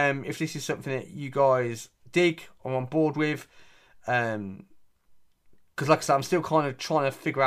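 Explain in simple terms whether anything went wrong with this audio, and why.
Nothing went wrong; this recording has no faults.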